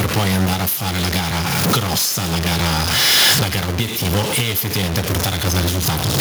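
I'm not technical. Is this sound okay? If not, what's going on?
No, there are two problems, and both run through the whole clip from start to finish.

The first is a stuck bit. The speech has a gritty edge, and the quiet gaps between phrases aren't silent but filled with a steady hiss of noise. This is likely a fault in the recording chain where one piece of the digital signal stays fixed instead of following the sound. That roughens everything and floods the pauses with noise.

The second is gain pumping. The level gets shoved down on every loud sound. The swing is big. The likely cause is the microphone level being set far too high, with an automatic level control clamping down on every loud moment. Loud and soft parts end up squashed together.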